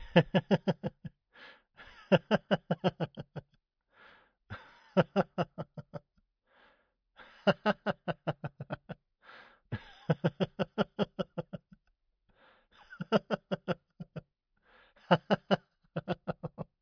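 Everyday sound recording with no technical faults detected.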